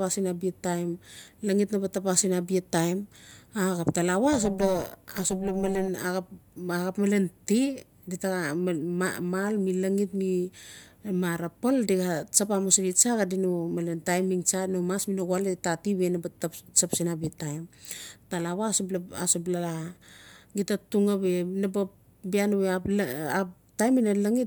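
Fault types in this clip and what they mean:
overlap-add ripple: from 4.33 to 5.88 s the speech takes on a metallic buzz with extra tones around each sound. The audio was split into windowed frames and rejoined with an overlap whose windows do not add up to a steady gain, so the level dips and swells once per frame, here around 400 times a second, by about 11 dB. That deep, rapid modulation rides on the speech for the whole stretch.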